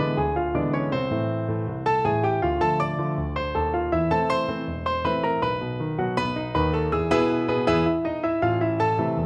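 No technical faults are audible.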